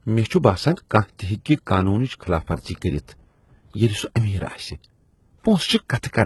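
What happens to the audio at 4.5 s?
At 4.5 s the speech carries the same heavy codec damage present throughout: the upper spectrum sounds synthetic, with gritty, lispy sibilants. This is likely HE-AAC compression at a bitrate around 16 kbps. The treble is rebuilt by copying lower bands upward rather than coded directly, so harmonics misalign above the crossover. A spectrogram shows a hard ceiling at 11.8 kHz and repeated, smeared patches in the upper band.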